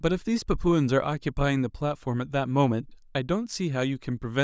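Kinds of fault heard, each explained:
No technical faults can be heard in the speech recording: the signal stays continuous and stable throughout, with no audible disturbance from the recording or transmission chain.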